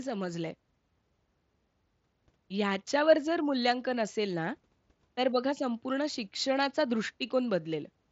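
No technical faults turn up anywhere in this speech recording. It has passed through a Bluetooth mSBC headset codec, which leaves nothing above about 7.8 kHz and a light graininess typical of that wideband link.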